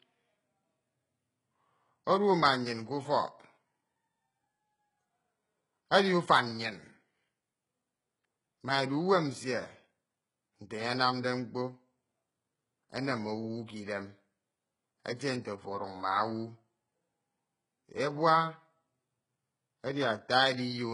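Throughout the speech, sibilants come out gritty and lispy, the treble sounds synthetic, and nothing is present above about 11.1 kHz. The likely cause is heavy HE-AAC compression at a very low bitrate, around 12 kbps, rebuilding the upper band from copied lower harmonics.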